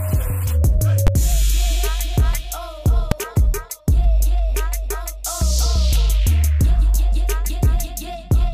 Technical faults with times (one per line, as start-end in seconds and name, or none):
1.07 invalid numbers at full scale
3.11 invalid numbers at full scale